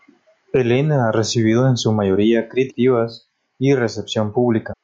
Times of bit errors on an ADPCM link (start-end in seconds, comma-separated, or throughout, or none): none